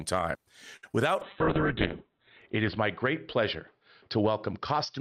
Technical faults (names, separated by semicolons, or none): short stall from a late packet; short concealed packet loss; call bitrate drop